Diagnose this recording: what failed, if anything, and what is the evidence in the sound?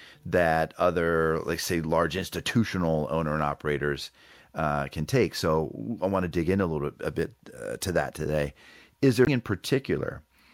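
Damaged data in a compressed stream, at the codec stage. A brief disturbance runs from 9.24 to 9.28 s. The decoder misread corrupt frames and lost sync.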